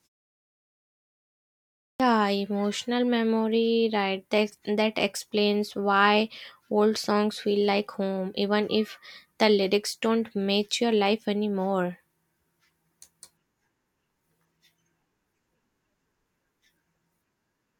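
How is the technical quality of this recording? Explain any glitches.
The recording has one glitch: a clipped start after a pause, where the first moment of sound is lost as speech resumes.

From 1.96 to 2.00 s, after about 2 s of silence, roughly 38 ms is cut from the onset of "emotional memory right". The playback device went idle during the pause and had not fully woken, so the phrase begins abruptly. On a waveform it jumps from flat to full amplitude with no rise, and a spectrogram shows a hard vertical edge with the first sound missing.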